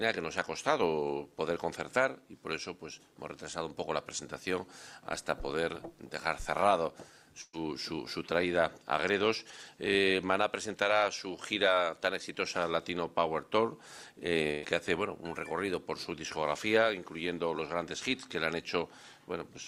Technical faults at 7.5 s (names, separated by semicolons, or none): burst of packet loss